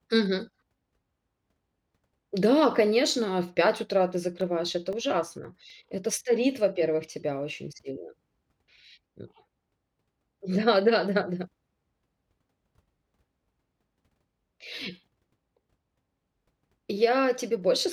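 From 4.15 s to 6.22 s, just after "утра ты", the speech carries CD scratch ticks. There are nine of them, spaced fairly evenly at a little over four per second. Each is very brief, the longest only about a millisecond and a half. A scratch or blemish on the disc spoils more data than the error correction can restore, once per revolution. The player then patches or mutes those samples. The result is a regular train of tiny clicks and micro-dropouts over the speech.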